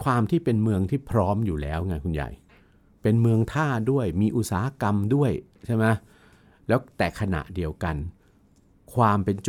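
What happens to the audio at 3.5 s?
Nothing goes wrong at 3.5 s; the speech there comes through intact, with no dropout, click or distortion.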